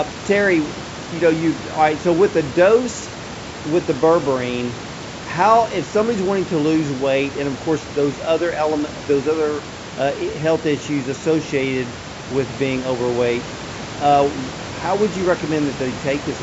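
Nothing stood out as a technical problem on listening to this speech recording; the call's microphone processing and the room noise, about 16 dB below the speech, both sound as expected.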